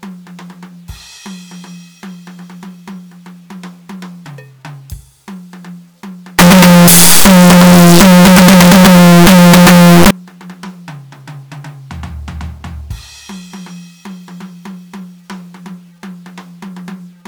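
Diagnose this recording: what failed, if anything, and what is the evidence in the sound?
Signed and unsigned mixed up, from 6.39 to 10.11 s: the music abruptly turns into a loud, harsh buzz in which quiet passages are as loud as the peaks, then returns. The stage is sample-format conversion, and the likely cause is 8-bit samples read with the wrong sign convention. That flips the top bit, so every zero crossing jumps across the full range.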